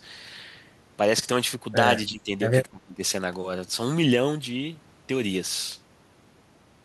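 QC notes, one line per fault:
2.07–2.32 s and 2.71–3.01 s, speech suppressed in double talk: the speech dips by about 15 dB, then about 20 dB, likely an echo canceller ducking the talker while the far side speaks. On a spectrogram the energy thins, and the waveform shows two short notches.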